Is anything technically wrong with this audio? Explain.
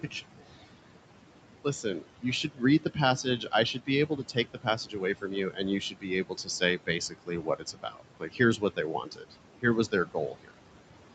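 Yes, two related problems come from the noise suppressor.

Noise suppressor artifacts run throughout the clip. The suppressor lowers each frequency band it judges to be steady noise, frame by frame. It pulls the room noise, which sits about 12 dB below the speech, down by about 18 dB between phrases and lets it rise again underneath them, so the background pumps.

Speech cut by the noise suppressor happens between 1.36 and 10.6 s, adding up to about three seconds in all. The suppressor mistakes quieter parts of the speech for background and turns them down along with it, by as much as about 18 dB at the deepest point. Soft consonants and word endings sound swallowed or faint.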